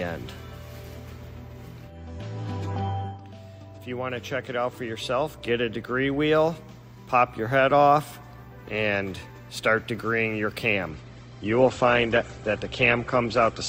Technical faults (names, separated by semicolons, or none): adaptive stream at a lower bitrate